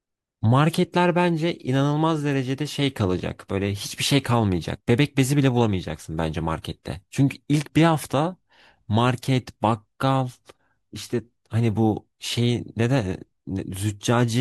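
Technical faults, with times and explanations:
Nothing technical stands out here; the speech comes across with no faults to flag at any point.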